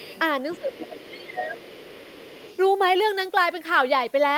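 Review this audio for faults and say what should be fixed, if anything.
A second voice sits under the speech from 0.0 to 0.2 s, 0.5 to 0.98 s and 1.15 to 2.59 s, roughly 20 to 25 dB down. This is the other side's voice leaking through, likely loudspeaker echo the canceller left in the microphone signal. Preventing it needs stronger echo cancellation or a headset.

Between 0.55 and 1.69 s, while that far voice is present, the speech dips in level, by up to about 15 dB, for about a second in total. This is speech suppressed in double talk, likely the canceller attenuating both voices together. Preventing it needs a canceller with better double-talk detection.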